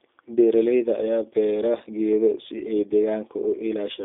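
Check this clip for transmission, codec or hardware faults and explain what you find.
One fault runs through the whole clip: G.729 codec damage. The speech is rebuilt at a rate consistent with 8 kbit/s from a vocal tract filter and sparse pulses, sounding plainly rough and synthetic. A spectrogram shows energy confined between 200 Hz and 3.6 kHz, with smeared harmonics.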